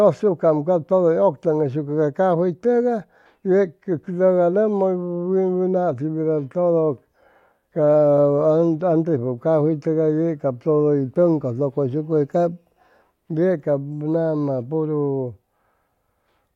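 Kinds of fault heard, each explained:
Nothing stood out as a problem on listening to the recording.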